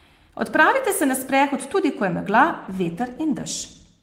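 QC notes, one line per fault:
2.63–4.02 s, call bitrate drop: from 2.63 s to the end, the speech turns coarser and rougher, consistent with the encoder being told to spend far fewer bits, which fits a fall from about 32 to 16 kbps. It never recovers before the clip ends.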